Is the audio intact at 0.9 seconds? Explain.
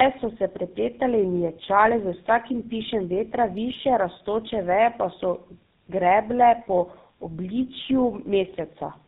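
No. At 0.9 seconds, as throughout the clip, the speech carries tandem speech coding. It sounds as if it passed through two speech codecs in a row, likely an AMR-NB link and then GSM full rate, with a transcoding hop between them. Each coder re-encoded the previous one's errors, so the voice is rough, muffled and warbly. A spectrogram shows nothing above 3.8 kHz, with smeared, jittery formant bands.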